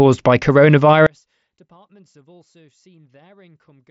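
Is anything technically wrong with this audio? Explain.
Yes. From 1.07 s to the end, the speech collapses by about 37 dB into a faint trace. That's likely one channel inverted, so the shared centre cancels when summed to mono.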